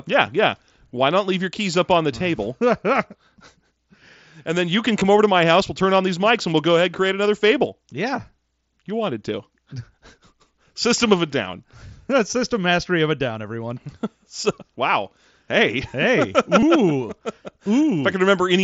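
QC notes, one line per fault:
5.00 s, 12.30–12.33 s and 16.60–16.63 s: concealed Bluetooth headset packet loss. Gaps of 15 ms (between "and then you can" and "over to my house") and 22.5 ms (before "system mastery of a", and at 16.6 s) are filled by repeating recent waveform, giving a brief buzzy patch.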